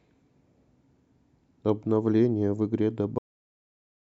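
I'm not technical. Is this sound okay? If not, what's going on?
No. This speech clip has a cut-off end: the recording stopped saving before the speaker finished, so the last stretch never got written. At 3.18 s the voice stops mid-sound and drops straight into dead silence, with no natural fade, until the clip ends.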